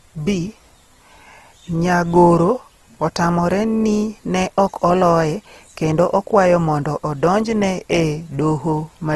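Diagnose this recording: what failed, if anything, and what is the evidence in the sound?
The failure is at the codec stage. Throughout, the speech sounds grainy and rough, and nothing remains above 12.1 kHz. The cause is likely Opus compression in its music mode, at a low rate near 16 kbps. Starved bands get noise instead of detail.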